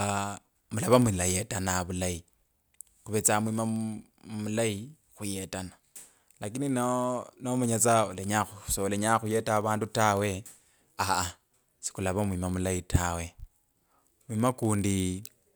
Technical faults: block size mismatch (padded)

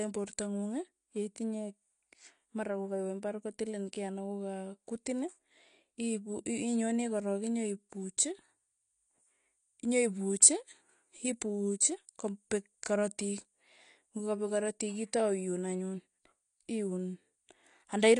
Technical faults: AAC compression

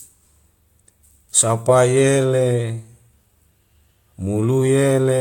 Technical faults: none

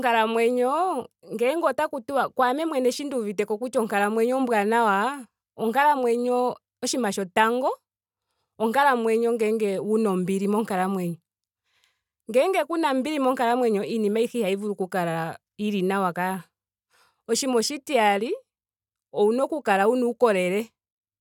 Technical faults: none

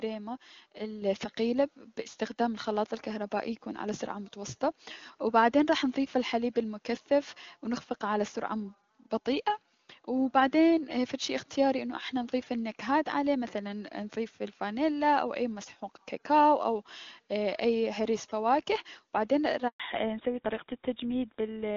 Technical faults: microphone volume stepped up; handover gap; fallback to narrowband

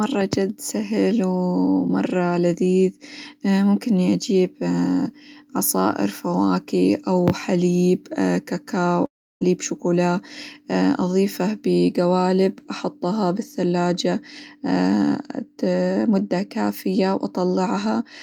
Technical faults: long network dropout

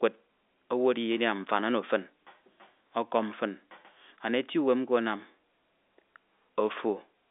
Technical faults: none

